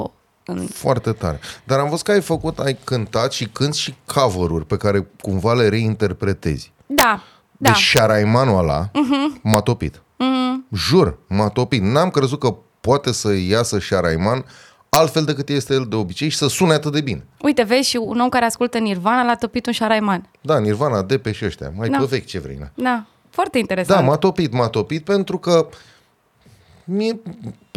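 Integer overflow at 6.99–7.03 s after "care cumva le reinterpretezi", 7.68–7.98 s, 9.54 s, and 14.94–14.96 s before "decât este el de": speech peaks about 2–3 dB over full scale wrap to the opposite sign instead of limiting, giving violent cracks far harsher than clipping.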